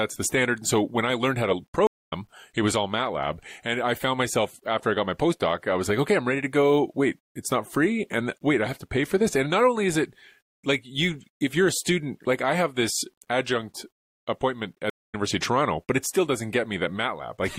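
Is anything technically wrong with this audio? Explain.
Yes, there are two problems. Throughout the speech there's a grainy distortion that tracks the voice, riding about 50 dB below it, and it gets gritty on quiet passages. That's likely low bit depth without dither: rounding to roughly 10 bits leaves an error that moves with the signal instead of sitting as steady hiss.

There are also two stream reconnects, at 1.87 to 2.13 s and at 14.90 to 15.15 s. Each has a silence of about 0.2 s, after which a fresh decoder picks up further along, skipping roughly a fifth of a second the first time and about 0.15 s the second.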